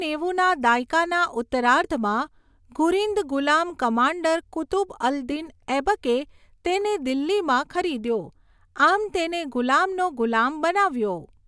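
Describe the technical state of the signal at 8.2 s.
At 8.2 s the speech signal is intact, with no audible technical fault at that moment.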